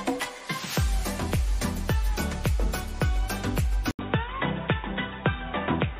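At 3.91 s the sound drops out for 80 ms. When it returns, it is dull and boxy, with nothing above 3.8 kHz, and it stays that way to the end at 5.99 s. A faint new background noise sits far below the signal. The level stays about the same. This points to an input switched to a poorer device. The likely cause is a mid-recording change to another microphone or a headset's narrowband call profile.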